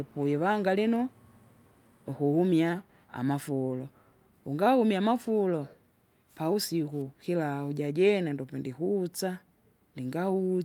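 No technical faults can be heard anywhere in the recording.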